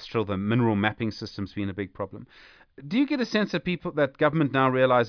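No technical faults can be heard anywhere in the speech. Nothing in the audio stands out as broken or damaged.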